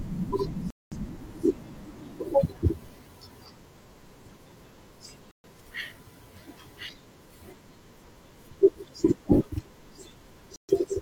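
A digital broadcast dropout hits this speech clip three times: the receiver lost good frames and muted, so the sound cuts to silence at 0.70 to 0.97 s, 5.31 to 5.48 s and 10.56 to 10.73 s. The longest hole fits about five lost frames, and the shorter two about three each. What was broadcast during each gap is simply gone.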